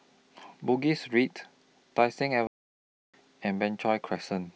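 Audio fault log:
2.47–3.14 s: playback stall. The speech cuts to silence mid-flow for 666 ms, then resumes. The player likely ran short of buffered data.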